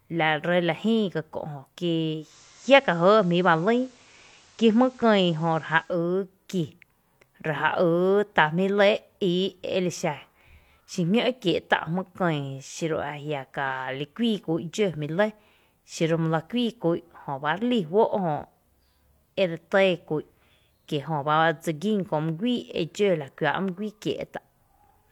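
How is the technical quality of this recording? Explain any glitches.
One glitch stands out. From 2.15 to 6.00 s, digital radio blending to analogue occurs. The receiver cross-fades to FM over 225 ms, adding hiss about 30 dB down, and shifting level by about 1 dB.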